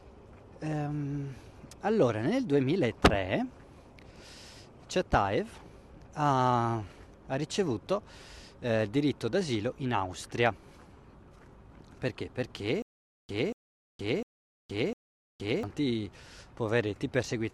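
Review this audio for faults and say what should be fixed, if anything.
From 12.82 to 15.63 s there is a stutter with silent gaps: a 236 ms burst repeats four times, each followed by 467 ms of digital silence, a steady 703 ms cycle. Likely a stalled stream replaying its last fragment on each retry, losing the audio meant for that stretch. Unlike a plain dropout, the identical burst recurs at an even pace. Larger playback buffering with proper underrun handling would prevent it.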